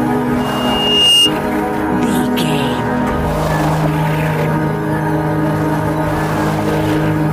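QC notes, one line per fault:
0.40–1.33 s, loudspeaker feedback squeal: a microphone was picking up the loudspeaker it was feeding, and around 2.8 kHz the loop gain went above one, so that frequency fed on itself and grew. It is heard as a thin, piercing single tone that swells over most of a second until it sits roughly 5 dB above the rest of the sound, then stops at 1.33 s.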